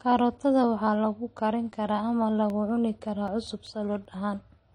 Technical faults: transcoding between lossy codecs; CD scratch ticks

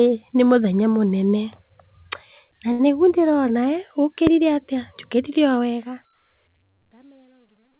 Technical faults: short stall from a late packet; loud pop

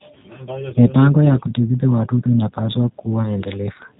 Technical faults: G.729 codec

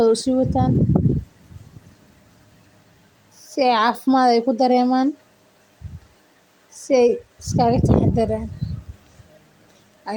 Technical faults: none

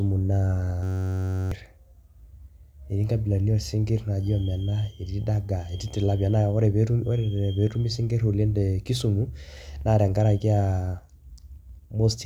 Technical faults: system hang loop

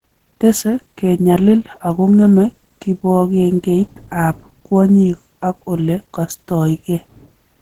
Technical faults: Opus compression

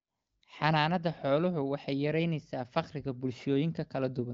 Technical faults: none

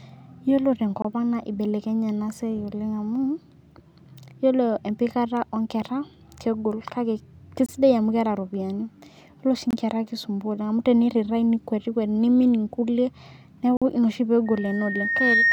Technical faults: block of digital silence; loudspeaker feedback squeal

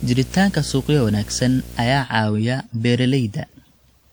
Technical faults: generation loss; video or display buzz

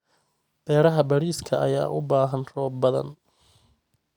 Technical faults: none

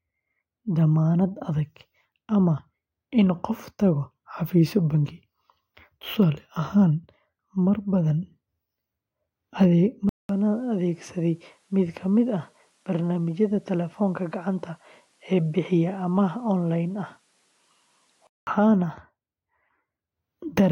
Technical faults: input switched to a poorer device

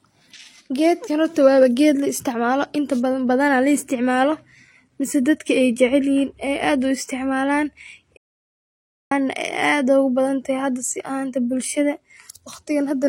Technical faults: transcoding between lossy codecs; audio dropout to silence

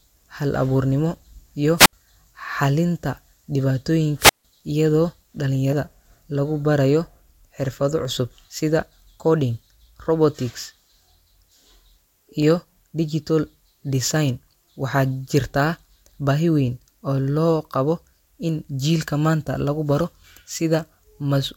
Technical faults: dropped samples; wireless microphone squelch dropout; compressed frames skipped

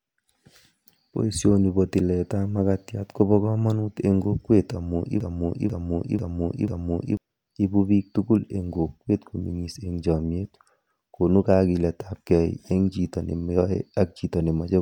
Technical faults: broken-record loop

